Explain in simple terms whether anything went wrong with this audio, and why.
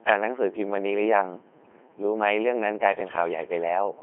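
Throughout the speech, a Codec 2 vocoder has heavily damaged the voice, which sounds robotic, buzzy and muffled, with nothing above about 3.7 kHz. Unlike a plain phone line, which only muffles, the voice here is rebuilt from tones rather than kept.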